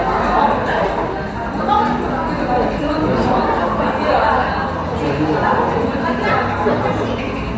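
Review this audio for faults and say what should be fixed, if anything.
No faults turn up anywhere in this recording of sounds. Nothing here needs fixing.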